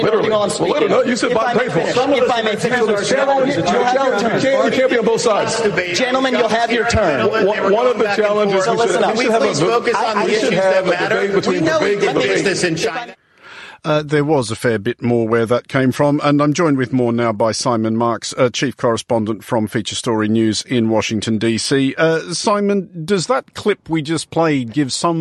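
No technical faults are audible.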